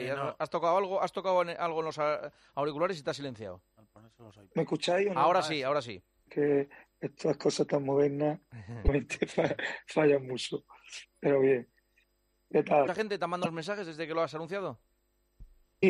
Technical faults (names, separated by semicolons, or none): damaged data in a compressed stream